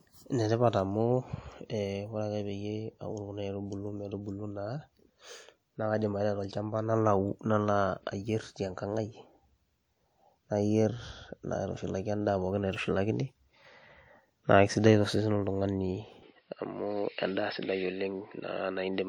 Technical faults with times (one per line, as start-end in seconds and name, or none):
16.23-19.08 input switched to a poorer device